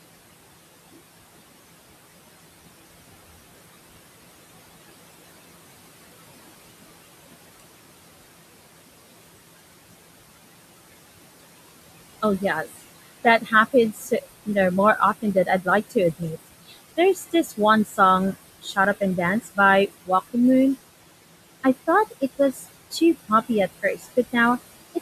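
Noise suppressor artifacts run throughout. Room noise about 15 dB below the speech is pushed down about 20 dB between phrases, then swells under them. A spectrogram shows a pumping noise floor.

Speech cut by the noise suppressor occurs at 12.22–12.79, 13.24–14.48 (ending before "know more"), 14.99–16.37 (after "know more"), 16.68–17.99, 18.33–20.36, 22.53–23.5 and 23.83–24.34 s. The suppressor mistakes quiet speech for noise and drops it by about 12 to 20 dB, so those fragments sound swallowed. The waveform shows brief notches in the speech envelope.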